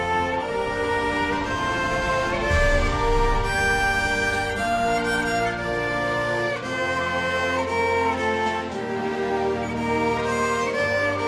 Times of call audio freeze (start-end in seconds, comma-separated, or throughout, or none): none